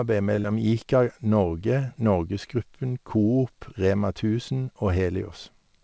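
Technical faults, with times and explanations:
0.36 to 0.40 s, short stall from a late packet: a packet arrived late and the jitter buffer ran dry, so the receiver held the last sound for about 19 ms, then resumed where it had stopped. Nothing is lost; the sound is simply drawn out with a faint buzz or dip, unlike a loss, which leaves a gap.
0.40 to 0.46 s, short concealed packet loss: right after the stall, about 40 ms of audio never reached the G.722 decoder, and the receiver covered the hole by extending the preceding sound before blending back. This is heard as a brief smear or wobble where real content is missing, not merely delayed as in the stall.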